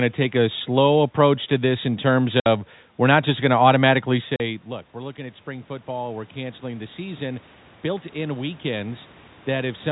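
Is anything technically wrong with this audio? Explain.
Yes. Two faults are audible.

Packet loss filled with silence occurs twice. At 2.40 to 2.46 s, between "to this in terms" and "we're not just going", the receiver lost 60 ms of audio and played silence instead. This fits three lost 20 ms packets. Another 40 ms hole follows at 4.36 to 4.40 s. Both gaps start and stop abruptly, so the speech is chopped.

Automatic gain rising begins at 4.1 s, just after "not just going to", and runs to about 9.87 s. When the talker moves back around 4.0 s, the input falls by about 16 dB. The gain control then slowly adds about 10 dB, so the voice and the room noise swell together over several seconds.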